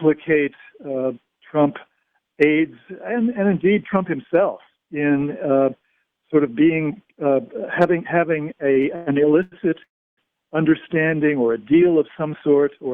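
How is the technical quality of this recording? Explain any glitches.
The recording has two network glitches late on. From 8.73 to 9.54 s there are repeated stalls (stutter): four short gaps, the longest 106 ms, where the jitter buffer kept emptying and the last sound was extended, so the audio drags unevenly. At 9.84 s there is one longer call audio freeze lasting 336 ms, likely from packets held up in transit. The sound stops and falls almost entirely silent before resuming at 10.19 s. Unlike the stutter, it is a single continuous gap rather than several brief hitches.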